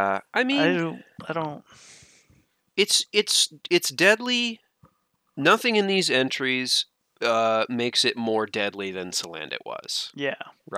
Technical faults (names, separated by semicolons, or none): none